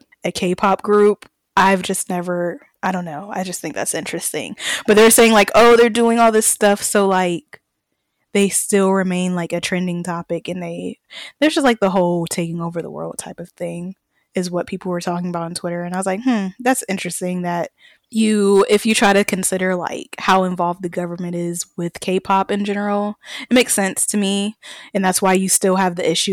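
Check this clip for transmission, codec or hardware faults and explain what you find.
Hard clipping runs through the whole speech clip: a stage was driven about 16 dB past its limit, so roughly 2 percent of samples hit the ceiling and were squared off. Those flattened peaks add high harmonics, heard as harsh crackle and fuzz on louder syllables.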